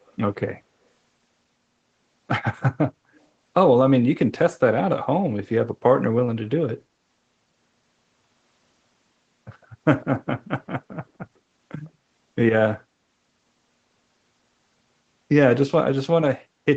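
Four brief scraps of a delayed copy of the speech sit behind the main sound. They fall at 0.07 to 0.14 s, 3.16 to 3.20 s, 9.62 to 9.66 s and 11.85 to 11.90 s. Each lags the original by 153 ms. They are very faint, far below the speech. The likely cause is an echo leak. A loudspeaker at one end played the call into its own microphone. The echo canceller missed these short pieces, and they were sent back.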